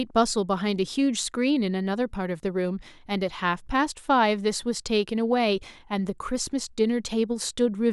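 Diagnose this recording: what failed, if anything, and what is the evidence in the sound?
Nothing failed here that I can hear; the speech comes through intact, with no stage in the chain giving itself away.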